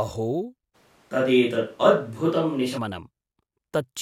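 From 0.76 s to 2.77 s the speech turns abruptly roomy and hollow, losing low-end body, then snaps back just as suddenly. This is likely a switch to a distant microphone, with the close microphone dropping out and a farther one covering the gap. Loudness barely changes, but a faint room-noise bed appears, around 35 dB below the speech. Unlike added reverb or an EQ change, the early reflections, thinner bass and noise floor all arrive together at hard edges.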